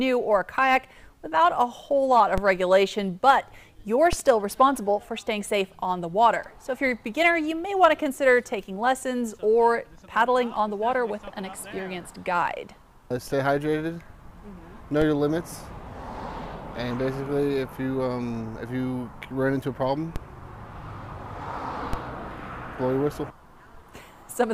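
At 2.38, 4.13, 15.02, 20.16 and 21.93 s, DC steps suddenly shift the waveform's zero line by about -14 to -16 dBFS. A 20 Hz high-pass then drains each offset away. Each step is a dull low thump. On a waveform, the trace jumps off centre and sags back. On a spectrogram, each step is a brief vertical smear concentrated at the bottom.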